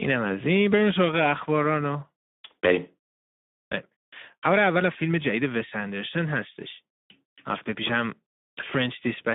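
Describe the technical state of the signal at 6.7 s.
At 6.7 s, as everywhere in the clip, there's plainly audible Speex codec damage: the speech sounds hoarse and noisy from a starved excitation at a near-11 kbps bitrate, squeezed into roughly 150 Hz to 3.6 kHz.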